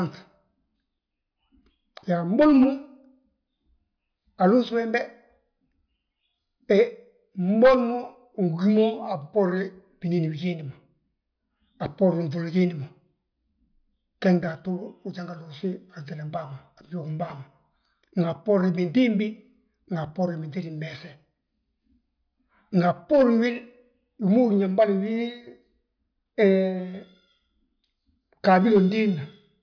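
No technical faults can be heard in the speech at any point.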